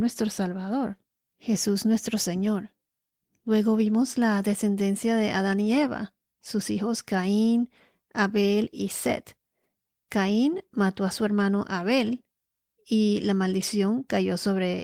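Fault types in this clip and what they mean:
No faults detected.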